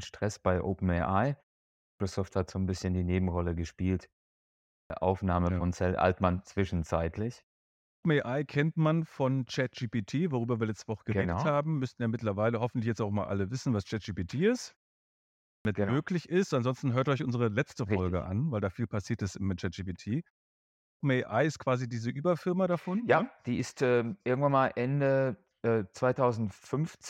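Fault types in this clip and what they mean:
Clipped start after a pause: speech bursts abruptly out of silence with its first 0.32 to 0.37 s missing, five times between 1.66 and 20.66 s. During each short preceding pause the output device sleeps, and it wakes too late to catch the onset.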